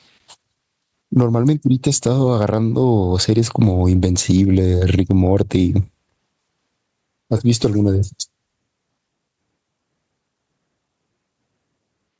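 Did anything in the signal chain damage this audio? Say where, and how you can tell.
Yes. There's gain pumping all the way through this speech: the gain gets yanked down on each loud sound, a swing of around 10 dB. Loud and quiet passages sit unnaturally close together, so everything sounds squashed. The likely cause is the mic input gain set far too hot, with a fast limiter or compressor clamping each peak. The call's mic processing, which stops at 8 kHz, is just normal band-limiting.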